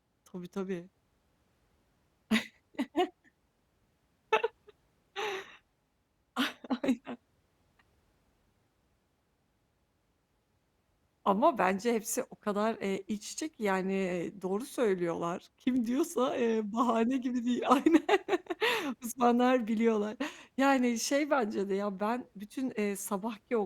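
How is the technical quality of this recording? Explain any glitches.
No technical faults can be heard.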